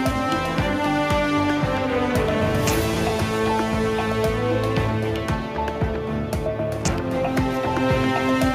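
No technical faults can be heard anywhere in the audio.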